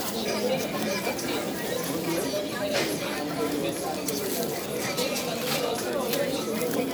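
No faults detected anywhere in this recording of sounds.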